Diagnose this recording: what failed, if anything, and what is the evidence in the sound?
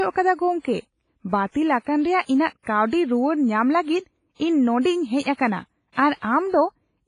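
Codec stage: the speech has a washy, ringing quality with signal-following hiss and nothing above 10.5 kHz, likely WMA compression at a low bitrate, around 24 kbps.

Pre-echo at 0.60–0.65, 2.63–2.67 and 5.92–5.97 s: hiss spreads about 45–50 ms before sharp attacks, because quantisation noise fills the whole transform block.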